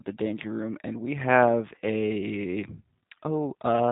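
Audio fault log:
Throughout: G.729 codec. The speech is carried by a low-rate CELP voice codec that rebuilds each 10 ms frame from a vocal tract filter, a pitch predictor and a handful of pulses. The result is plainly rough and slightly synthetic, with nothing above 4 kHz, which fits the 8 kbit/s G.729A variant. A plain low-pass filter would dull the top without adding this coarse, modelled texture.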